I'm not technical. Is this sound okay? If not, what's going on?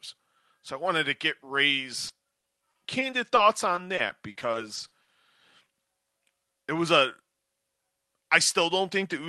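No. Repeated packet loss (robotic sound) hits at 2.07–3.39 s and 3.75–5.10 s. Tiny pieces vanish and get patched over. The speech sounds choppy and robotic.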